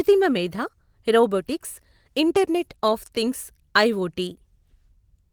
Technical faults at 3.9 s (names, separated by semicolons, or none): none